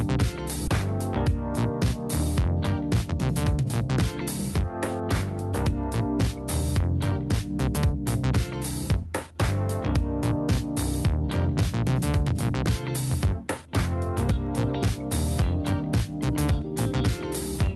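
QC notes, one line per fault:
0.67–0.69 s, skip ahead: Playback jumps forward with no fill and no silence, so about 0.7 s of audio never plays, and the material on either side is butted almost directly together. This happens when the receiver discards a backlog of audio that arrived late, cutting the delay in one step instead of gradually. On a waveform there is a sudden discontinuity with no gap. On a spectrogram a vertical seam appears where the spectral content changes abruptly, with no transition.
2.39–3.64 s and 5.68–14.33 s, jitter buffer speed-up: In both stretches the audio runs about 3% fast at unchanged pitch. The buffer had built up more delay than it targets, so the receiver repeatedly trimmed short pitch-period-sized pieces, removing roughly 50 ms in the first stretch and roughly 300 ms in the second. On a spectrogram the harmonic spacing stays the same while events sit marginally closer together. 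The waveform shows periodic cycles quietly spliced out. The underlying call path sounds like Opus at a rate consistent with about 40 kbps, with content stopping at 12 kHz.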